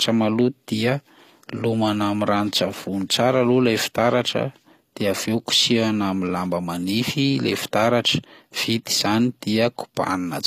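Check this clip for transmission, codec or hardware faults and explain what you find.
One codec fault runs through the whole clip. This is HE-AAC compression, likely at a low bitrate around 24 kbps: only the lower spectrum is properly coded, and the treble is rebuilt by copying lower bands upward. Throughout the speech, sibilants and upper harmonics sound plainly gritty, metallic and lispy.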